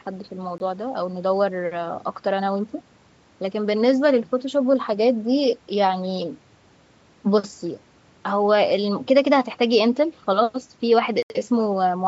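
At 0.58 s, a 20 ms block of digital silence interrupts the speech, and at 11.23 s a longer 75 ms block follows. The audio drops out abruptly: a short hole first, then a longer one.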